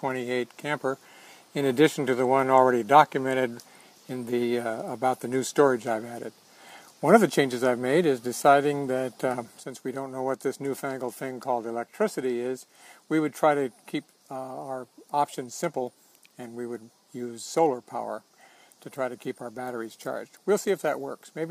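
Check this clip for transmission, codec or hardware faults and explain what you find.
There is one fault, a sudden gain jump at 9.6 s. From that instant until the end, the sound and its background noise both drop by about 6 dB at once, with no fade. This is likely a digital gain change applied from one sample to the next without a ramp. On the waveform the envelope steps down abruptly, and the spectrogram darkens evenly across all frequencies at 9.6 s.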